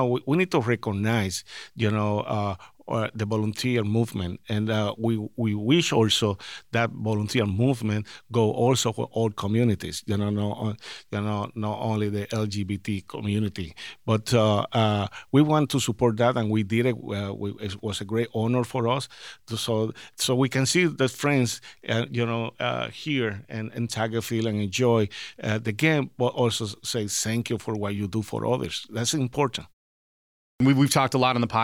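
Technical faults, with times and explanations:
30.45–30.60 s, clipped start after a pause: after a 0.8 s silence the output path wakes too late and loses the first 152 ms of speech, so the word bursts in without its opening sounds. The waveform jumps from flat line straight into speech already under way, and the spectrogram shows a hard vertical edge with no onset.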